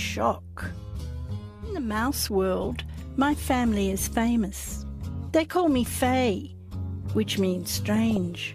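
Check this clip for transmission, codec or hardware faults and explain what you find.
One transmission fault is present. From 7.96 to 8.17 s there is DAB burbling. Weak reception lets bit errors (roughly 0.3 percent) slip past error correction into the MP2 data, so corrupted samples put short blips of noise into single sub-bands. The result is burbling blips over the sound, whereas packet loss would silence or repeat it.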